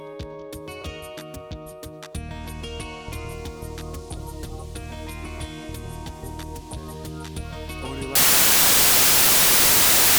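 From 8.15 s to the end at 10.18 s, the samples are built from the wrong bytes, so the jittery low bits swamp each value and it becomes loud, harsh broadband noise.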